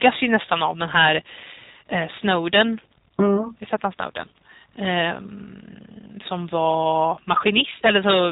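G.729 codec damage runs through the whole speech clip, from start to end. Nothing survives above 3.8 kHz, and the voice has a rough, slightly synthetic edge. Each short frame is rebuilt from a vocal tract filter, a pitch predictor and a handful of pulses rather than the real waveform, so the fine detail is replaced by an approximation. The plainly audible roughness fits the 8 kbit/s G.729A variant.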